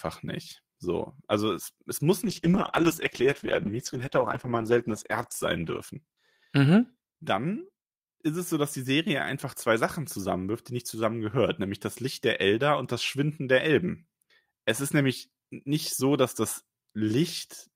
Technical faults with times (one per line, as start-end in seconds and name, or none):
2.29-6.67 call bitrate drop